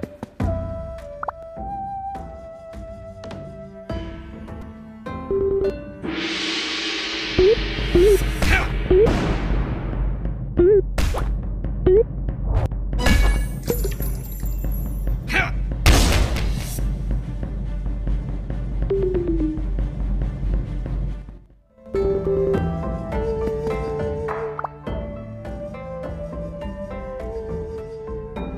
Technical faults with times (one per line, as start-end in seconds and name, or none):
1.43 repeated buffer
4.62 repeated buffer